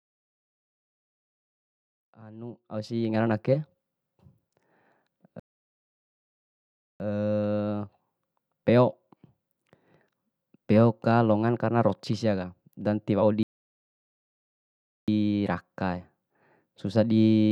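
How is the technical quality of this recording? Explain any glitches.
The speech drops out twice from playback stalls. Between 5.40 and 7.00 s, and again between 13.43 and 15.08 s, it goes silent for about 1.6 s, likely because the player ran out of buffered data. Each time it resumes after the gap. The gradual fade-in over the first 3.25 s is a normal edit.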